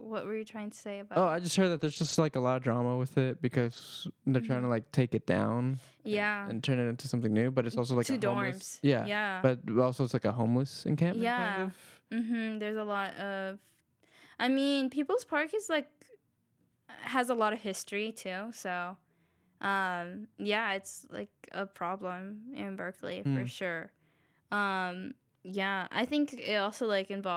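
Short concealed packet loss at 1.77 to 1.81 s in this speech clip, just after "I just heard", leaves a brief smear or wobble. About 20 ms of audio never arrived in time, and the receiver bridged the hole by extending the preceding sound before blending back into real audio. Lost packets rebuilt from error correction follow at 1.81 to 2.19 s (ending just before "like a lot of"), at 3.61 to 3.79 s (right after "of drama with it"), and briefly at 20.69 s. The decoder played lower-bitrate copies carried in the following packets, so there are no gaps, but those stretches sound rougher and noisier. The rebuilt audio in them amounts to about ten, five and one 20 ms frames.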